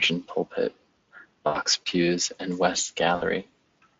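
At 1.47 to 1.59 s and again at 3.15 to 3.23 s, you get VoIP packet loss concealed by the speech codec. Roughly 80 ms and 60 ms go missing, and the decoder stretches the last sound into a buzzy, fading smear.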